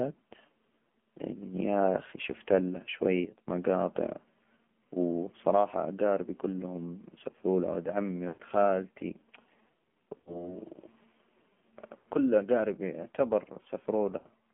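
Speech heard through an AMR narrowband mobile codec, with the band held to roughly 150 Hz to 3.4 kHz and a buzzy, synthetic edge that fits a low mode around 7.4 kbps. At 3.25 s, right after "يا أخي شفت لها", there's a sudden gain jump: the level drops about 13 dB until 3.48 s, likely a gain step applied with no ramp. Lost AMR speech frames show up at 8.28 s after "سفرو لها ولد عمي", and at 10.18 s, 11.99 s just before "كل أجاربي", and 14.18 s. Each time the sound smears and fades for 60 to 120 ms, which fits the decoder stretching the last good frame over a few missing 20 ms frames.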